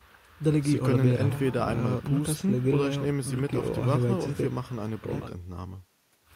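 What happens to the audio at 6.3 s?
At 6.3 s the audio is intact, with no dropout, click or distortion at that point.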